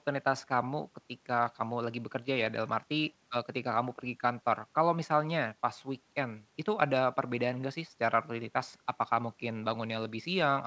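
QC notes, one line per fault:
No faults heard.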